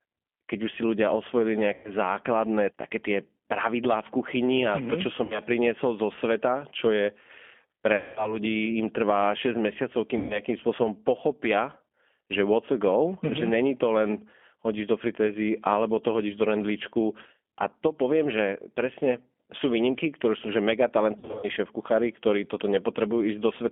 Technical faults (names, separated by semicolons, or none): G.729 codec; VoIP packet loss concealed by the speech codec